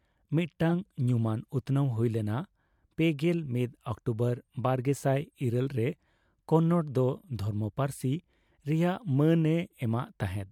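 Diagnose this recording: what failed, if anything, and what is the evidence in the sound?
The codec stage failed, with corrupt frame decoded at about 0.69 s in the speech. You get a quick glitch, peaking around -20 dBFS, that doesn't belong to the voice at all. Some bits in a compressed frame got flipped, and the decoder played it anyway, so misread gains and codes dumped energy at the wrong frequencies. It's so short that it looks like just a few damaged frames.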